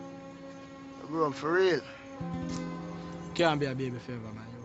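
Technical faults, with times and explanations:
No technical faults can be heard anywhere in this clip.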